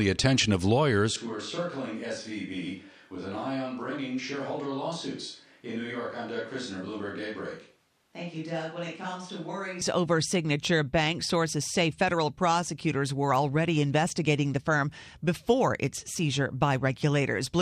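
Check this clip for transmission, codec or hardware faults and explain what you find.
One fault affects this speech clip. From 1.16 to 9.81 s there's a switch to a distant microphone, likely from a lost close-mic feed. The speech abruptly turns hollow and roomy, about 10 dB quieter, with its waveform visibly stepping down and its spectrogram losing low end.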